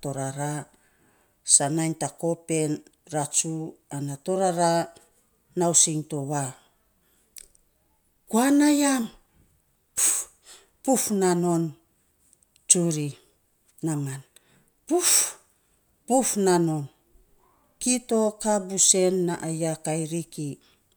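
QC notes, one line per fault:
Nothing to flag here; the speech comes through without any faults worth noting.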